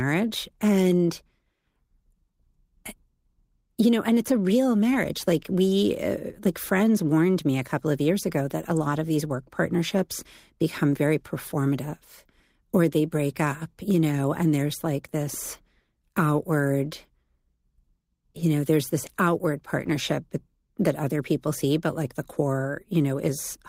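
Nothing in the recording stood out as a technical fault on listening.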